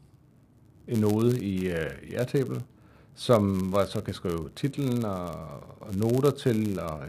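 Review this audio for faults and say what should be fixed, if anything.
A steady buzz at 99.6 Hz runs under the speech throughout, which is slightly slow, at 0.996 times normal speed and about normal pitch. This block size mismatch (padded) comes from one stage writing blocks slightly shorter than the next reads, leaving a zero-filled gap in each block. To prevent it, set both stages to the same block size, or buffer between them so every read is completely filled.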